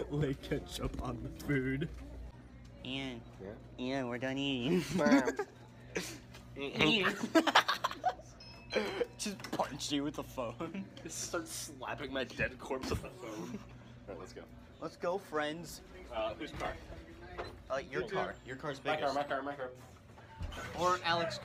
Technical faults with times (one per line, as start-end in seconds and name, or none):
4.91-5.09 loud pop